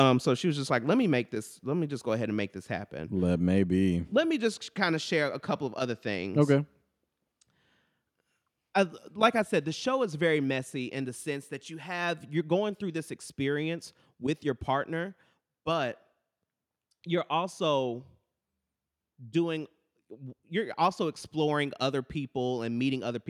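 Speech, with microphone overload from 0.00 to 0.03 s, just before "so she was just": peaks exceed full scale by about 1 dB, likely from excessive input gain. The waveform shows flattened tops, and the spectrogram shows brief broadband crackle streaks.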